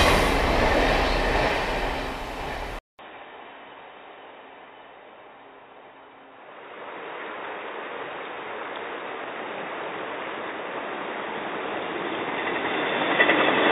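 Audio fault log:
2.79 s to the end: input switched to a poorer device. After a 200 ms gap, the sound turns duller and boxier, drops by roughly 5 dB, and gains a new background noise sitting some 35 dB below the signal. This is likely a change to a narrower-band microphone or headset profile. On a spectrogram, all energy above 3.8 kHz vanishes at the switch, leaving a flat ceiling. The waveform shows a brief flat gap, then a smaller envelope over a raised noise floor.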